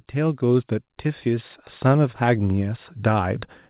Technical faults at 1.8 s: automatic gain rising

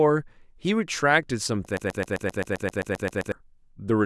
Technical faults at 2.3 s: broken-record loop

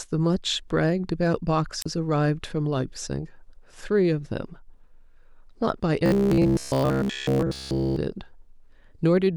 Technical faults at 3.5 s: none

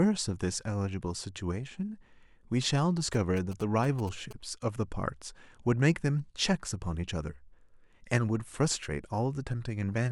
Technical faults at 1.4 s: none

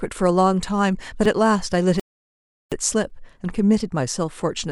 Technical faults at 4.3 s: none

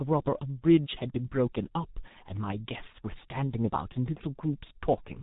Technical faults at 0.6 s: G.723.1 codec

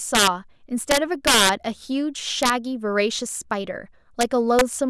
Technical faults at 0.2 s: integer overflow

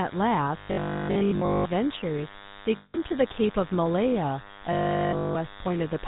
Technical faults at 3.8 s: DECT cordless phone buzz; GSM full-rate codec

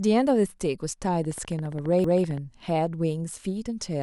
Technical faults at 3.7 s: none

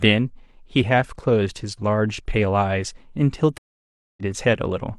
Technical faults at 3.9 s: stream reconnect

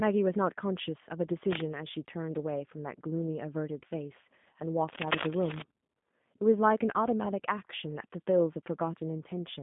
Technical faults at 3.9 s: G.729 codec

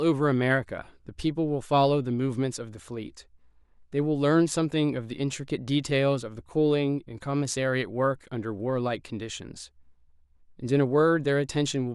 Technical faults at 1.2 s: none

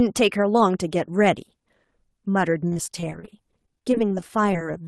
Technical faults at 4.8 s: repeated packet loss (robotic sound)

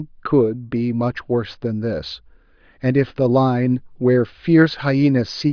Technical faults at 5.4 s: none

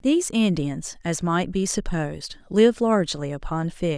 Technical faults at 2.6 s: none

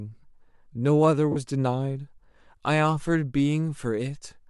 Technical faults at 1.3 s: lost LE Audio frames

